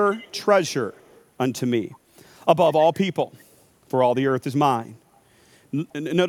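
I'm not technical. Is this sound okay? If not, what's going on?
No. The other end was likely playing the call on a loudspeaker, and its echo canceller let some of the speech back through. That's an echo leak. A faint copy trails about 168 ms behind at 0.07–0.45, 0.66–0.74, 0.92–1.24 and 5.15–5.19 seconds, fading each time.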